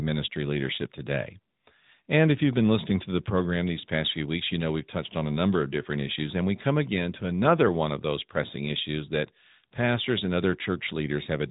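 AMR narrowband mobile codec damage runs through the whole clip. The speech has been squeezed through the 2G/3G phone codec, which samples at 8 kHz and rebuilds each 20 ms frame from a vocal-tract model fed by a handful of pulses. Nothing above 3.8 kHz survives, so the speech sounds boxed-in and telephone-like, and the plainly audible buzzy, synthetic edge fits a mid-range rate around 10.2 kbps.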